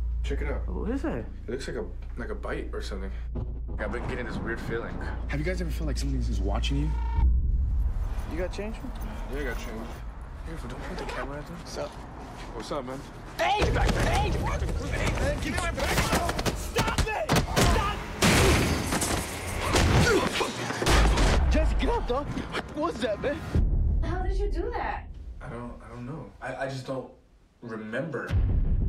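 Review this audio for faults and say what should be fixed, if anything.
No faults turn up in this audio, so nothing needs to be fixed.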